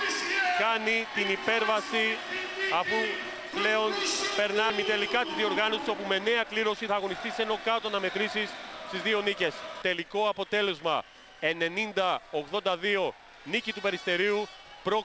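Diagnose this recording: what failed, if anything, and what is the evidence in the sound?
The network and jitter buffer stage is where this one went wrong. At 4.70 s there's a skip ahead: the sound jumps forward with no gap at all, and something like 0.7 s of audio never arrives. The two sides are butted straight together, so you get an abrupt splice rather than a dropout. That fits a late burst of packets overflowing the buffer, which then threw away the oldest chunk to catch up, cutting the delay by about the same 0.7 s.

Right after, from 4.86 s to 7.01 s, you can hear a jitter buffer speed-up. Playback runs at about 105% but the pitch stays put, so that stretch sounds a bit hurried. The receiver is still draining surplus audio by cutting out tiny pitch-period-sized slices over and over, roughly 100 ms in total. All of this sits on a G.722 call path at 64 kbps, so there's nothing above 8 kHz anywhere in the clip.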